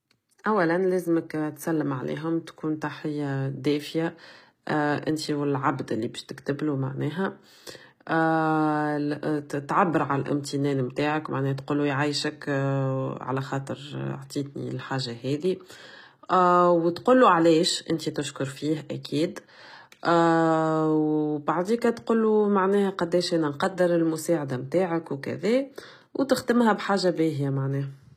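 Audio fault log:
Throughout: HE-AAC compression. The speech has gritty, metallic sibilants and a treble that sounds synthetic, with nothing above 14.9 kHz. This is likely HE-AAC at a very low bitrate, about 20 kbps, rebuilding the top band from copied lower bands.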